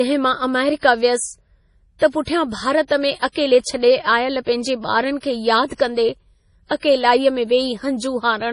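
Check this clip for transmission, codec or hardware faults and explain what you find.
Yes, there is one fault: MP3 compression, present throughout the speech. Nothing reaches above 10.5 kHz, so a spectrogram shows a flat ceiling. Heavy band dropouts make sibilants swirl and chirp, which points to a likely low bitrate around 32 kbps.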